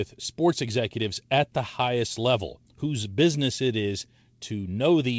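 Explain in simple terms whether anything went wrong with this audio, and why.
Nothing went wrong here: the speech simply came through an ordinary call connection that leaves out everything above 8 kHz, which is just how that kind of link normally works.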